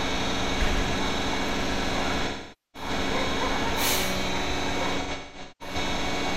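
AAC frame loss with concealment occurs from 2.27 to 2.89 s, where about 470 ms of audio is replaced by a smeared, phasey fill. From 5.00 to 5.75 s, losses scatter over roughly 600 ms, with the longest gap near 200 ms.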